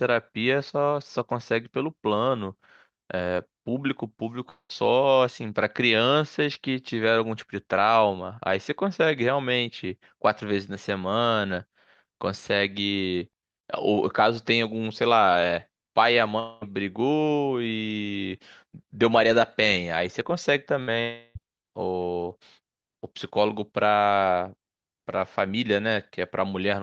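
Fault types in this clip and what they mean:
long network dropout: Incoming audio likely stopped arriving for 0.2 to 0.34 s at a time. The receiver stretched the last sound into a fading buzz or hiss, with about 70 ms of silence before the return at 4.71 s, and the audio resumed with those stretches gone.
burst of packet loss: Around 20.81 s, about 60 ms of packets went missing or came too late to play. The receiver held the preceding sound and let it fade into a brief buzz or hiss, then the audio jumped ahead past the lost stretch.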